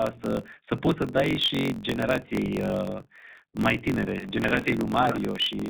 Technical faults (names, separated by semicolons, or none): iLBC codec; block size mismatch (truncated)